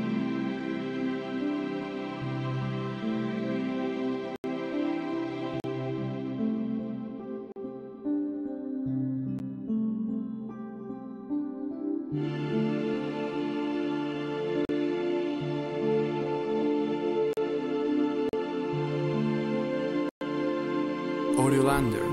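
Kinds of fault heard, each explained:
Block of digital silence: the sound cut out abruptly to silence eight times, mostly for 40 ms.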